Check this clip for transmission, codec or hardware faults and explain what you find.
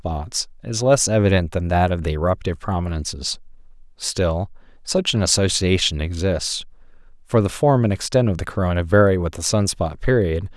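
Nothing wrong turns up anywhere in this speech recording, so there's nothing here to flag.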